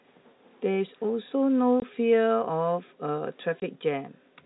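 At 1.80–1.82 s and 3.60–3.62 s there's packet loss filled with silence: a 20 ms gap each time, fitting one lost packet, with hard edges.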